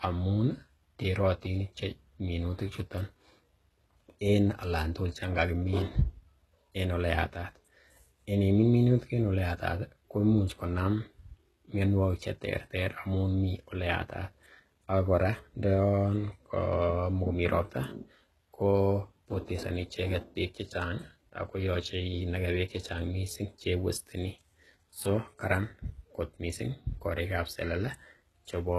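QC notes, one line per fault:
Throughout, HE-AAC compression: the treble above about 12.3 kHz is missing, and the upper band sounds synthetic, with s sounds coming out gritty, metallic and lispy. The likely cause is spectral band replication: the coder kept only the lower spectrum and filled in the top by copying lower bands upward under a coarse envelope, so harmonics no longer line up across the crossover. The plainly audible damage fits a very low bitrate, around 16 kbps.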